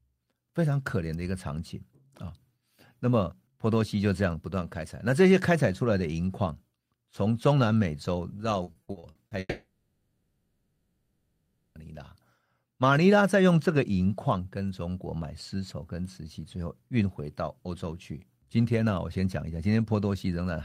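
From 8.63 to 9.34 s the speech turns choppy and robotic, the mark of repeated packet loss. Seven short holes, none longer than 40 ms, are each filled by stretching the preceding sound, so about 39% of that stretch is patched rather than real. A spectrogram shows a run of smeared, flat-topped columns where the harmonics freeze briefly, and the waveform shows small repeated blocks breaking up the normal syllable shapes.

Almost immediately after, from 9.39 to 11.78 s, the speech stops and is replaced by a sustained, fading buzz. This is a long network dropout, likely caused by a stall in which no audio arrived for about 2.4 s. The receiver keeps extending the last sound for nearly the whole gap, leaving only about 20 ms of true silence. On a spectrogram this appears as static horizontal bands with no new onsets that gradually thin out. The waveform shows a smooth, decaying envelope until the speech resumes abruptly with that stretch missing.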